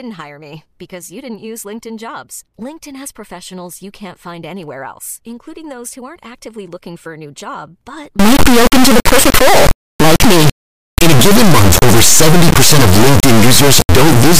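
Integer read as float begins at 8.19 s and runs to the end of the clip. From that point the speech is replaced by an extremely loud, harsh buzz that behaves like a square wave, snapping between silence and the clipping limit. The bit patterns of the integer samples are being interpreted as floating-point values, which points to 32-bit integer data taken as 32-bit float. Most samples land either near zero or far beyond full scale, so quiet stretches drop to silence while everything else hits hard clipping.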